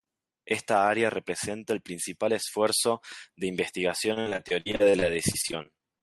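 Repeated packet loss (robotic sound) runs from 4.13 s to 6.02 s, starting just after "principal esfuerzo de investigación". Well over a dozen short dropouts, the longest about 53 ms, arrive in quick succession, and each is patched by stretching the last stretch of sound forward. About a quarter of this span is filled in that way, so the speech turns choppy, with fragments missing. It is carried over a call codec whose top end stops near 12 kHz.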